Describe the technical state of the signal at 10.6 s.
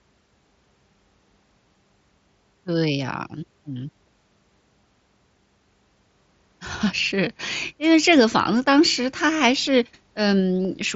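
At 10.63 s a short burst of voice packets failed to arrive between the Bluetooth headset and the phone, which fits a run of about three lost packets. This is concealed Bluetooth headset packet loss: the receiver bridged the gap by repeating the best-matching stretch of the most recent waveform. Because the run is longer than a single packet, the speech briefly becomes a buzzy, steady tone held at full level, with a slight warble where the real signal resumes.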